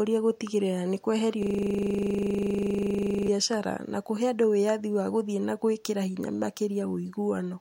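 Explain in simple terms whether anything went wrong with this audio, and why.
A system hang loop runs from 1.43 to 3.28 seconds. The computer froze while the sound hardware kept replaying the same 40 ms snippet of speech dozens of times, so instead of moving on, the audio turns into a steady buzz at 25 times per second.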